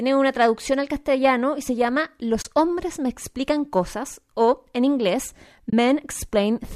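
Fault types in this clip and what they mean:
AAC frame loss with muting: at 2.42 s after "castellano y se llama" and 5.70 s after "cosas o en inglés", about 30 ms of lost frames are zeroed, leaving soft-faded gaps.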